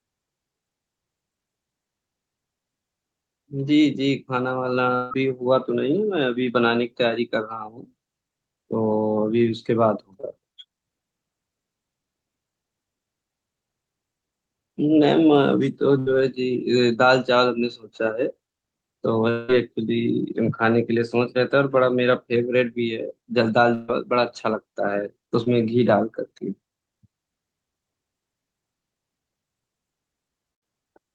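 A long network dropout runs from 4.95 to 5.13 s. About 160 ms of speech never arrives, likely because the connection stalled. The receiver carries the last sound forward as a fading buzz or hiss across the whole gap, with no silence left, and speech picks up further on without the lost stretch.

Short concealed packet loss follows at 10.21 to 10.25 s. Roughly 20 ms never reached the decoder in time. The receiver covers it by continuing the preceding sound and blending back, heard as a brief smear or wobble.

A burst of packet loss at 15.99 to 16.08 s drops about 80 ms. The gap is filled with the previous sound held and turned down, so it sounds like a short fading buzz or hiss before speech jumps ahead.

A second long network dropout spans 19.30 to 19.50 s. Around 180 ms is missing, all of it covered by the same decaying continuation rather than silence.

Another burst of packet loss at 23.74 to 23.90 s removes about 140 ms, filled with the held, fading sound.

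Short concealed packet loss recurs at 25.44 to 25.48 s, with about 20 ms smoothed over as a quick wobble.

A final burst of packet loss at 30.54 to 30.63 s drops about 80 ms, again bridged by a dimming continuation of the last sound.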